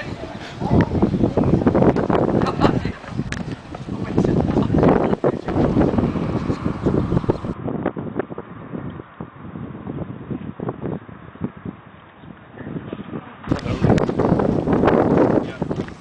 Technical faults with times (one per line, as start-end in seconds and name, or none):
7.53-13.49 input switched to a poorer device